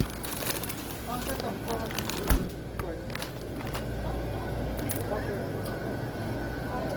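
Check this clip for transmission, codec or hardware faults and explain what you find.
There is one fault, present throughout the clip: Opus compression. Starved of bits, the encoder, likely Opus in its CELT mode at a rate fitting 16 kbps, fills bands with folded or noise content, making the sound plainly grainy and rough while still reaching about 20.2 kHz.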